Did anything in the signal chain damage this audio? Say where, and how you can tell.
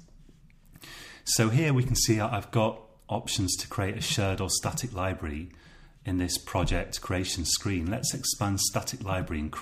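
No damage from the signal chain.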